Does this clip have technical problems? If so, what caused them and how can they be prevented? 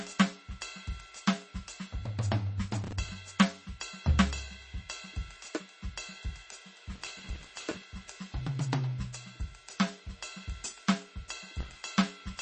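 Yes. Throughout the music, MP3 compression at a very low bitrate, likely around 32 kbps, leaves the sound watery and swirly with smeared attacks. A spectrogram shows a hard ceiling at 8.3 kHz and flickering holes below it. Encoding at a higher bitrate prevents this.

Processor overload crackle tears through the sound at 2.84–3.09 s, 6.96–7.82 s and 11.59–11.84 s. The processor missed deadlines on buffers of around 5 ms and replayed stale audio each time. The waveform shows a dense run of hard-edged jumps. Larger buffers or a lighter processing load prevent it.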